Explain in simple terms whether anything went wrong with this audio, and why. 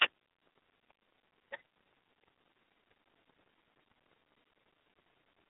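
The speech has passed through the iLBC codec from start to finish. It has the muffled, phone-line sound of a narrow band, with nothing above about 3.7 kHz. Unlike a simple muffling filter, it also sounds rough and slightly synthetic, because each 20 ms slice is rebuilt separately.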